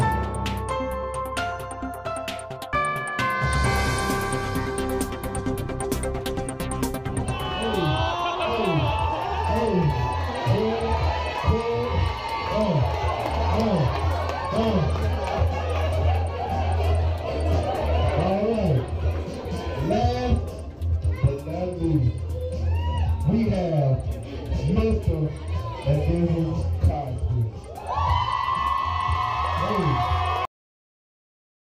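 At 30.45 s the audio shows a cut-off end: the final buffers were never written out, so the sound stops mid-event and drops straight to digital silence with no natural decay. That dead silence runs for the remaining 1.3 seconds or so.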